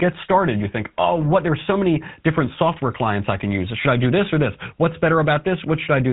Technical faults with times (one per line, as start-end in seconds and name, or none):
0.00-6.12 GSM full-rate codec